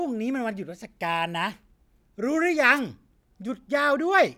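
At 2.75 to 2.80 s, a wireless microphone noise hit: the radio signal fades briefly, receiver hiss swells into a roughly 46 ms static swish, showing as a thin broadband band.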